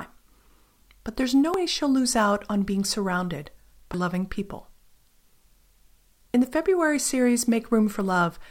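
Speech with audio missing between chunks: skips at 1.54 s (between "but there's no" and "she'll lose out on"), 3.94 s (after "out on being surrounded") and 6.34 s each lose about a tenth of a second, joined without silence at strictly regular spacing, likely a recorder working in 2.5 s chunks, unlike random dropouts.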